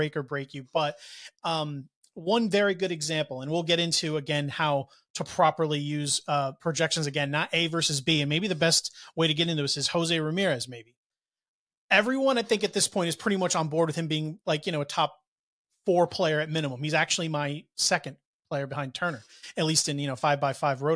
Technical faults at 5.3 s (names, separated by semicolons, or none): none